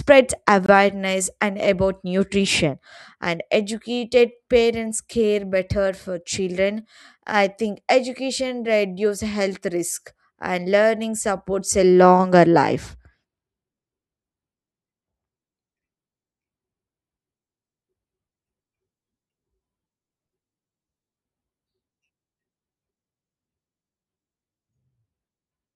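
From 0.66 to 0.69 s the speech drops into a block of digital silence about 23 ms long, which fits a 1024-sample output buffer left unfilled. The hard cut to silence and back has no fade, unlike a faded dropout or smoothed concealment.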